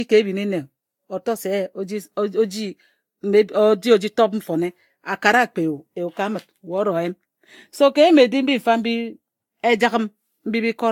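Across the whole speech clip there is generation loss: the sound is swirly and hollow, with smeared consonant attacks and a watery shimmer beyond what a single lossy pass would give. The likely cause is about three successive lossy encodes, which fits a Vorbis-style codec near 70 kbit/s, each pass adding fresh quantisation noise. On a spectrogram, content stops at about 19.3 kHz, and the upper bands show patchy holes and smeared blocks.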